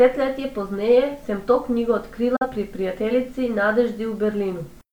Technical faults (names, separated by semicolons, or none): digital broadcast dropout